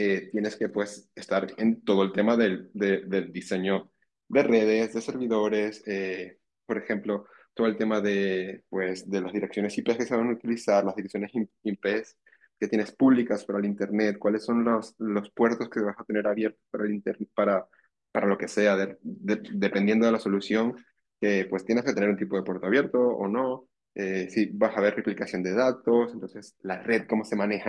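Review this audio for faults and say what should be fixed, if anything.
No faults; nothing to fix.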